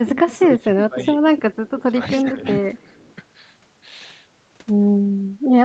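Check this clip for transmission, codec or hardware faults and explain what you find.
Two kinds of fault are audible: a leaking echo returned at a steady delay, and the main speech being turned down while both sides talk at once. The whole clip stops at about 8 kHz, as expected for the call path.

Echo leak, 0.17–0.83 s, 1.38–2.05 s and 2.78–3.15 s: a faint copy of the speech arrives about 0.3 s late each time (298, 301 and 303 ms). It sits about 15, 20 and then 35 dB below the speech. The likely cause is a far-end loudspeaker whose echo canceller did not fully remove what its microphone picked up, so part of it was sent back. Reverberation would form a smooth tail that decays. This is a distinct repeat at a fixed lag, and it fades across the clip.

Speech suppressed in double talk, 0.04–1.21 s, 1.66–2.45 s and 5.04–5.09 s: the main speech dips by about 10 dB in the first two spans, over roughly half a second and 0.4 s in total. 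The last span is a brief 50 ms dip of about 5 dB. These dips are likely the echo canceller ducking everything when it cannot tell the local talker from the echo. Packet loss would produce abrupt gaps or concealment artefacts. Here the dips in the first two spans overlap the echo activity.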